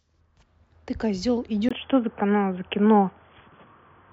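At 1.69 s a 20 ms silent gap appears in the waveform, then speech turns boxy, spectrogram empty above 3.4 kHz: likely an input switched to a poorer device.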